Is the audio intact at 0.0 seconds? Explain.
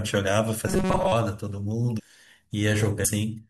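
Yes, the audio is intact at 0.0 seconds, with no fault present at that moment.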